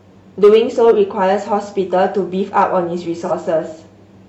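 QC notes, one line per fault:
0.44–0.91 s and 2.58–2.63 s, hard clipping: the speech peaks exceed what the signal path can pass, by about 5 dB in the first stretch and about 2 dB in the second. The flattened tops add high harmonics, giving crackle on the peaks across the first stretch and a brief crackle at 2.6 s.
3.25–3.32 s, AAC frame loss with concealment: a gap of about 43 ms, which fits a single lost AAC frame, is filled by the decoder from the preceding spectrum. The patch sounds smeared and noisy because the substituted content does not match the speech around it.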